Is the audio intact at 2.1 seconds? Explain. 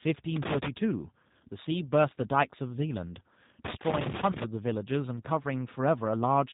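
No. At 2.1 seconds, as across the whole clip, the speech has passed through a G.729 codec, consistent with the G.729A variant and an 8 kbit/s stream. The codec discards the waveform and rebuilds each 10 ms frame from a vocal tract filter, a pitch predictor and a few coded pulses, with nothing kept above 3.8 kHz. The speech at that moment is plainly damaged: muffled, rough and somewhat synthetic, though still intelligible.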